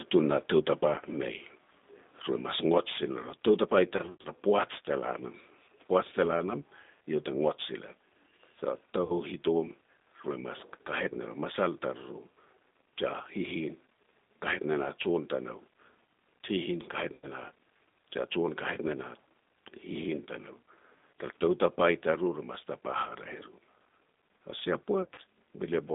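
Throughout, the speech runs through the G.729 codec at 8 kbit/s. The line is limited to 200 Hz to 3.7 kHz, and the speech is rebuilt from a simple model, so it sounds plainly rough and synthetic.

VoIP packet loss concealed by the speech codec occurs at 3.97 to 4.29 s, 9.04 to 9.13 s, 17.14 to 17.27 s and 25.02 to 25.2 s. Each time, the decoder stretches its last pitch and filter across the missing audio, so the sound turns briefly into a buzzy tone or a coloured noise that fades. The first and last events are broken up, with 180 ms lost over 280 ms and 100 ms lost over 160 ms.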